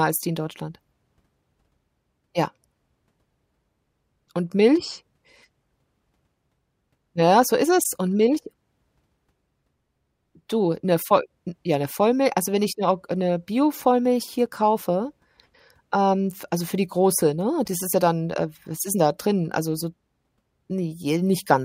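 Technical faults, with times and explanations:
14.46 s and 17.68 s, block of digital silence: Each is a tick or dip, the second falling between "für die große ne" and "das ist ja dann". For about 5.3 ms the speech drops straight to silence and jumps back with no fade, so the hole is too brief to hear as a gap. The identical length at both points fits a 256-sample output buffer left unfilled when the program ran late.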